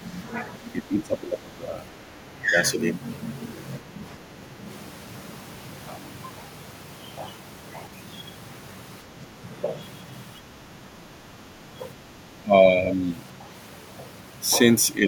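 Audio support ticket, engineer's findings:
Speech suppressed in double talk, 0.0–2.51 s, 3.79–4.63 s, 9.04–9.45 s, 10.38–13.03 s. Talker's level dips in pieces, deepest roughly 15 dB early, around 10 dB later. Likely echo canceller misreading double talk as echo and attenuating near-end speech along with it.

Other side's voice leaking through, 2.31–2.46 s. Brief faint scrap of a second voice, far below the talker, around 35 dB down. Likely residual loudspeaker echo the canceller failed to remove from the mic path during that suppression stretch.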